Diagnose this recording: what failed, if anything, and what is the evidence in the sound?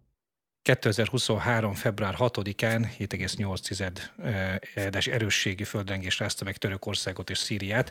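The wireless link failed twice, with a wireless microphone noise hit in the analogue FM radio path ahead of the converter. Short bursts of static swish over the speech from 2.67 to 2.76 s and from 4.77 to 4.86 s, each about 90 ms long. Reflected copies of the transmitter signal cancel at the receiver antenna, and the carrier fades. The FM receiver's noise then rises.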